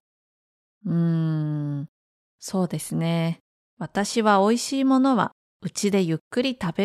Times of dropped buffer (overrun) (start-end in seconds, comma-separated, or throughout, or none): none